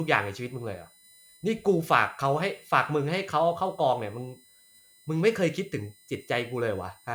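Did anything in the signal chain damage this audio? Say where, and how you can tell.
Yes: USB whine runs throughout the speech, a fixed 1 kHz tone strongest at 9 kHz, roughly 30 dB down, from 1 ms bus frames leaking through power or ground wiring.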